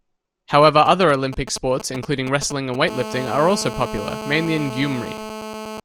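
Speech, with GSM signalling bursts from 0.86 to 2.76 s: a galloping run of ticks and brief 217 Hz buzzes, roughly 10 dB below the speech, as a nearby 2G phone's short radio bursts are rectified. From 2.88 to 5.80 s this turns into a continuous GSM phone buzz, a hard, raspy 217 Hz tone rich in harmonics at about 11 dB below the speech, consistent with the phone in a call.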